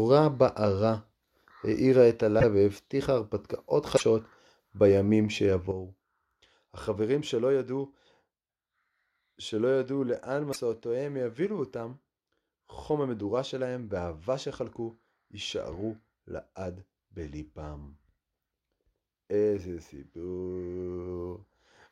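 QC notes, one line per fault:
2.39–2.44 s, 3.96–4.02 s and 10.52–10.56 s: broken MP3 bit reservoir. Each is a short garbled blip of about 45–55 ms, around two 26 ms MP3 frames, and the speech skips ahead. Likely frames were dropped, so the next frame pulled its borrowed data from the wrong bytes.
5.71 s to the end: sudden gain jump. The level drops by about 9 dB in a single step and stays there. Speech and background fall together, which points to a digital gain change, likely applied with no ramp.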